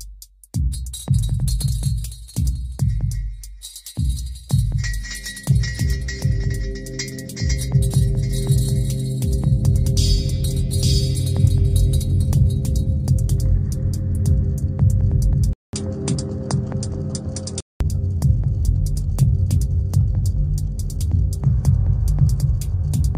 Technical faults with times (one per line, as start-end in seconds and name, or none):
15.53-17.80 input switched to a poorer device